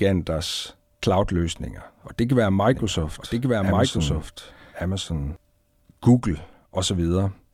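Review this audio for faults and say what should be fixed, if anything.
From 2.72 to 5.36 s the speech has a doubled audio track: a clean copy about a second behind, somewhat quieter, starting and stopping abruptly, unlike a decaying echo. This likely comes from a second capture path or an overlapping edit, so route the signal once and check edits for duplicated regions.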